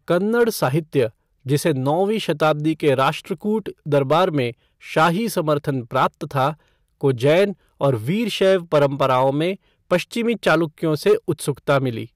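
Speech, and it's hard clipping from start to finish. The level going in was pushed roughly 7 dB past what the stage could pass, so the loudest peaks get sliced flat. Only a small fraction of the samples, something like one or two percent, actually hit the ceiling. Those squared-off tops add harsh high harmonics wherever the speech peaks.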